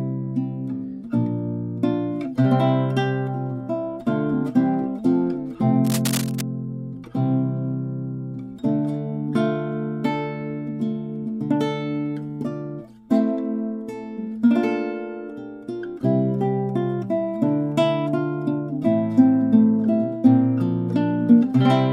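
From 5.84 to 6.41 s a burst of cable scratch noise rustles over the sound, roughly 10 dB below it. The likely cause is a worn cable or connector being moved, its contact resistance jumping about. Unlike isolated digital clicks, the scratching is dense and irregular throughout.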